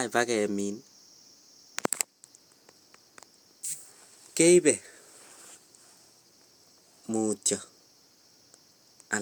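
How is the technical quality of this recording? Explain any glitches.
Nothing stood out as a glitch or technical problem anywhere in the recording on listening.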